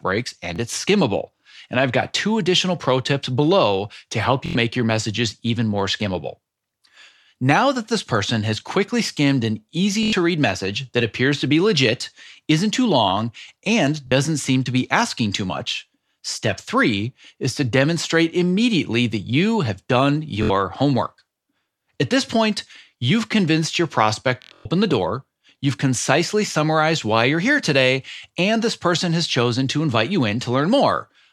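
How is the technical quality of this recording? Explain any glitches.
The speech is interrupted by Bluetooth stutter at 0.56, 4.46, 10.03, 14.07, 20.43 and 24.42 s. Late or lost packets made the receiver replay its last buffer, so a slice of about 23 ms repeats as a buzzing stutter lasting 23 to 93 ms, or scattered over 0.23 s at 24.42 s, before playback resumes further on.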